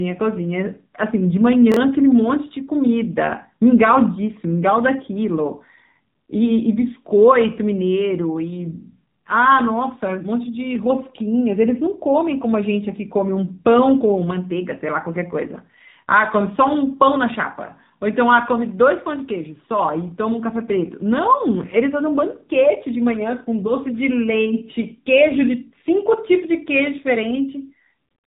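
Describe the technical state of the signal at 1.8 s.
Just before 1.8 s, from 1.72 to 1.77 s, a 23 ms chunk of audio played one chunk late, a case of chunks out of order. The swapped pieces meet at hard joins, heard as a brief jumbled stutter. Throughout, including 1.8 s, the speech passes through the AMR narrowband mobile codec. Its narrowband sampling cuts everything above 3.8 kHz, and its low bitrate, consistent with roughly 7.4 kbps, leaves a plainly buzzy, synthetic tone.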